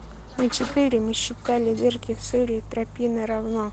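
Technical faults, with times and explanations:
No faults turn up anywhere in this speech recording, which has simply come through an Opus call connection working as it should, band-limited at about 8 kHz.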